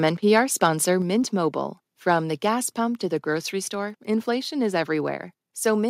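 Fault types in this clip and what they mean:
Microphone overload: Around 0.64 to 0.66 s, the loudest peak of the speech has its top flattened. That gives a brief, harsh crackle. The signal goes about 2 dB past the converter's ceiling, and only a small share of samples in that stretch are cut. The likely cause is an input volume set too high, so the peak runs into the limit of the analogue-to-digital converter. The waveform tops are squared off instead of rounded, which adds the gritty edge.
Microphone volume stepped down: At 1.02 s the whole signal, speech and background together, drops by about 3 dB in one sudden step. At 3.06 s it drops again by about 2 dB. Each change is abrupt, not a gradual fade. The likely cause is call software that judged the microphone too hot and cut the device's input volume. The first step comes shortly after the clipped peak at 0.64 s, which fits that reaction. 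The second step lowers the level further.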